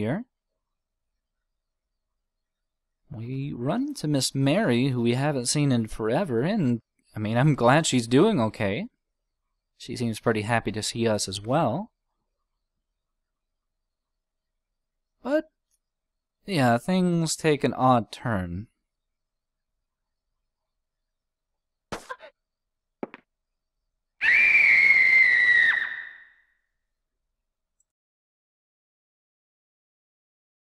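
No technical faults can be heard anywhere here.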